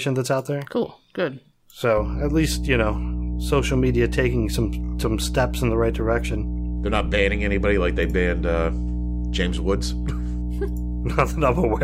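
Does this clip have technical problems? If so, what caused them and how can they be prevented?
Yes. Mains hum runs from 1.97 s to the end: a steady 60 Hz tone, nearly as loud as the speech, picked up from a ground loop or nearby transformer. Prevent it with a single grounding point, balanced cables and distance from power supplies.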